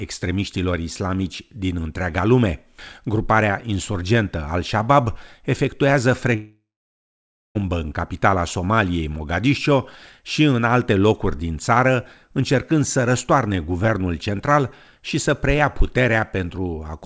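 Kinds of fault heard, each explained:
long network dropout: Packets likely stopped arriving for 1.2 s, from 6.36 to 7.58 s. The receiver stretched the last sound into a fading buzz, then left 0.92 s of silence, and the audio resumes without the lost stretch.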